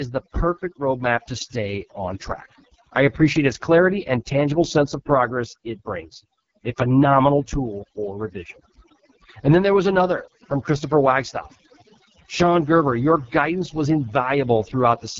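From start to finish the speech carries overdone noise removal: a suppressor set too hard has pulled individual frequency bands down to nothing wherever they sat near its noise estimate, taking quiet speech detail with them. The background falls to near silence sprinkled with twinkling specks. A spectrogram shows isolated bright dots scattered across a dark floor.

Running through the whole clip too is the AMR wideband (HD Voice) codec, and the heavy roughness and rasp suggest its lowest rate, around 6.6 kbit/s. The model-coded band tops out at 6.4 kHz, with synthetic noise filling the region above, and nothing survives beyond 7.1 kHz, a hard ceiling on the spectrogram.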